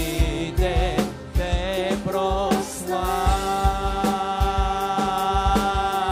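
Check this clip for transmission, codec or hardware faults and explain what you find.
No transmission, codec or hardware faults can be heard anywhere in the recording; the signal holds steady throughout.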